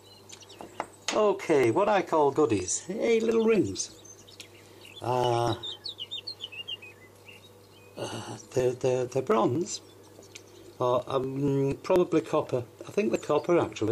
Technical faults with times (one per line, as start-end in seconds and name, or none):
0.19-13.88 periodic USB or driver dropouts